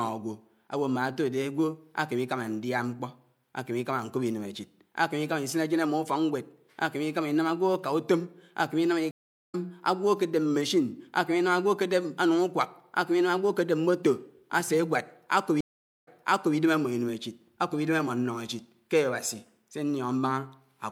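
A speech clip with two stream reconnects, where the connection dropped and the player restarted its decoder partway through the stream. At 9.11 s the audio cuts out for 424 ms and comes back around a third of a second further on, so a short stretch is skipped. At 15.61 s a 461 ms gap is followed by playback resuming 504 ms earlier, repeating about half a second of speech that has already been heard, through to 16.57 s.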